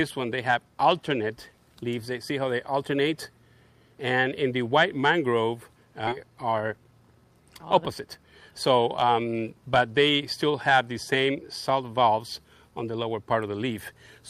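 At 6.07 s the sound jumps forward in a skip ahead. Roughly 0.7 s of audio is missing, and the two sides are butted together with no silence or fill between them. A stretch was dropped, in transit or by the receiver's buffer, while later audio was already queued. Unlike a dropout or a concealed packet loss, nothing stands in for the lost material. The sound just lurches ahead mid-flow.

Two jitter buffer speed-up passages follow, from 6.23 to 7.47 s and from 8.06 to 9.55 s. In each, the sound runs at about 111% of normal speed. The buffer was holding more audio than its target, so it trimmed short pitch-period-sized slices again and again, removing roughly 150 ms per stretch. The result sounds hurried. What separates this from a sample-rate or resampling error is that the pitch stays the same while only the pace quickens.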